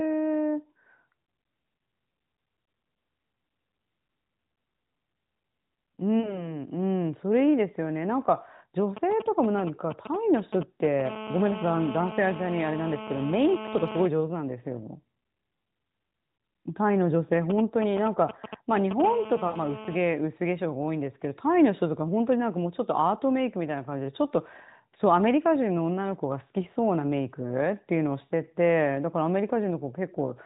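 At 6.20 to 6.53 s the speech briefly stretches and sags, then recovers a little rough. These are lost AMR speech frames: about 40 ms went missing, which fits two failed 20 ms frames, and the narrowband decoder bridged the gap by repeating the last good pitch and vocal-tract settings at falling gain. On a waveform the envelope dips; a spectrogram shows smeared, repeated harmonics below 4 kHz.

From 8.97 to 11.02 s come GSM signalling bursts, a galloping dit-dit-dit of short 217 Hz buzzes around 10 dB below the speech. A nearby 2G phone was sending brief groups of radio bursts that the audio circuit rectified. A spectrogram shows clustered vertical stripes with a harmonic comb.

From 11.05 to 14.07 s that becomes steady GSM phone buzz, a hard, raspy 217 Hz tone about 10 dB below the speech. The phone was transmitting its bursts continuously. A spectrogram shows an unbroken comb of lines at 217 Hz multiples, and the waveform shows a regular pulse train.

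The pattern repeats. Signalling bursts run from 17.50 to 19.02 s, louder this time at only a few dB below the speech, and steady buzz follows from 19.04 to 19.98 s at about 12 dB down. Inside that buzz, at 19.48 to 19.58 s, another run of lost frames totalling about 60 ms (three frames) makes the speech drawn out and faded.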